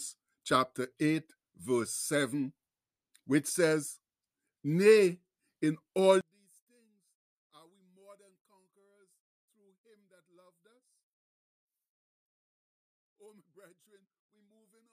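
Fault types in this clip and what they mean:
One channel inverted: after "in all" at 6.21 s, the speech falls about 35 dB in mono, likely because one channel's polarity is reversed, cancelling centred content.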